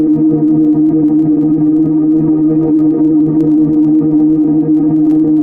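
No technical faults can be heard anywhere in this recording of sounds. Nothing in the audio points to a problem in how it was captured or carried.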